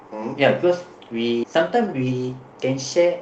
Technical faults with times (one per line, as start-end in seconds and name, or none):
1.43-1.45 skip ahead
1.53-3.21 jitter buffer speed-up